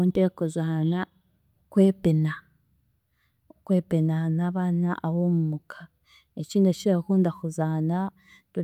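Speech with nothing technically wrong in it.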